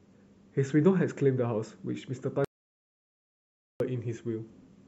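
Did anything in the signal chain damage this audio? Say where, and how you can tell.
Yes. At 2.45 s the speech cuts off mid-flow into a hole of dead digital silence, no room tone, no noise floor, and it snaps back at 3.80 s. That's an audio dropout to silence, about 1.36 s of material simply gone. Silence like that means the recorder or encoder kept writing while its input vanished, so the likely culprit is upstream at the input or link stage, a device dropping off or a stray mute, rather than anything in the codec.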